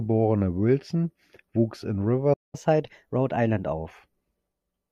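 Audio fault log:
2.33–2.55 s playback stall: the speech halts for about 0.2 s, likely because the player ran short of data. The waveform shows a flat gap, and the spectrogram shows an empty vertical band.
2.55–3.88 s catch-up at higher speed: resampled playback runs 1.15× fast, raising the pitch about two semitones. The spectrogram's harmonics shift upward and compress in time, then settle back.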